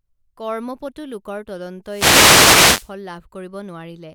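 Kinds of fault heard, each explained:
Wireless microphone noise hit: from 1.85 to 2.94 s the analogue radio link fades, so receiver static swells into a hissing swish over the speech for about a second. Unlike a digital dropout, the sound is masked by rising noise rather than cut to silence.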